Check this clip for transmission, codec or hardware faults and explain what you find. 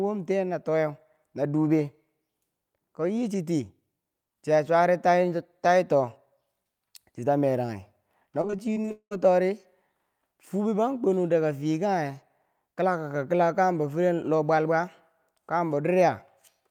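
One transmission fault is present: repeated packet loss, producing the familiar robotic sound, from 8.41 to 9.17 s. Over that span the stream keeps losing or delaying packets, roughly nine times. Each hole is papered over by stretching the previous sound, about 318 ms in total, and 340 ms of audio is simply gone. The longest gap is 196 ms. The speech turns choppy, with pieces missing. Unlike a single dropout, the patches come back to back, concealing about 42% of the stretch.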